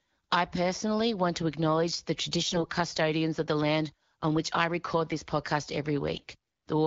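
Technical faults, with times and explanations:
2.46–2.67 s and 6.14–6.27 s, AMR bit errors: the speech briefly turns hoarse, scratchy and gargly while keeping its rough pitch and level. Flipped low-priority bits (around 5%, then around 10%) misplace the excitation pulses and skew the finer pitch, gain and spectral values.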